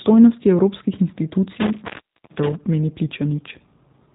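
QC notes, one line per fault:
Throughout, G.729 codec: the speech is band-limited and slightly rough and synthetic, with nothing above about 3.8 kHz, so sibilants and breathiness are dulled. The codec damage is plainly audible. Rather than sending the waveform, the codec models each short frame as a vocal tract filter, a pitch predictor and a few sparse pulses, then resynthesises it, which fits G.729A at 8 kbit/s. That rebuilt excitation gives the buzzy, slightly artificial texture.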